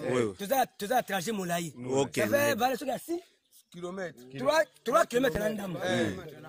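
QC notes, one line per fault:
5.35–5.38 s, loud pop: a sudden voltage pulse, likely a switching or static glitch, enters the chain, giving one sharp pop about 10 dB above the continuing sound.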